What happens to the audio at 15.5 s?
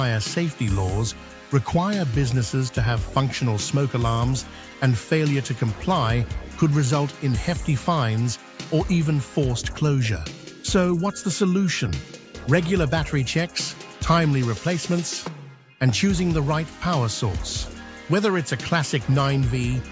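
Nothing goes wrong at 15.5 s: the audio plays through that moment intact, with no dropout, click, glitch or other fault.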